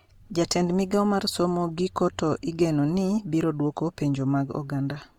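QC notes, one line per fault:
Throughout, Opus compression: the speech is plainly grainy and rough. Starved bands are filled with folded or noise-like content rather than left empty, so it sounds noisy but less swirly. Content still reaches about 20.2 kHz. The cause is likely CELT-mode encoding, which fits roughly 24 kbps.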